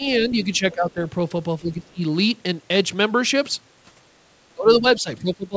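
An echo canceller caught in double talk most likely could not tell the near talker from the far end's echo and pulled both down, causing speech suppressed in double talk. From 0.0 to 1.01 s the speech dips by around 10 dB for roughly 0.7 s in total. It drops harder, around 15 dB, between 1.61 and 2.02 s, and again from 4.55 s to the end, where it sounds ducked and patchy.

Inside that last stretch, the far-end signal from the loudspeaker was likely not fully cancelled at the microphone, so the other side's voice leaks through. At 4.96 to 5.0 s a brief scrap of the other side slips in, roughly 35 dB below the speech. It is faint and clipped short. The band stops at 8 kHz throughout, which fits a G.722 call codec at 64 kbps.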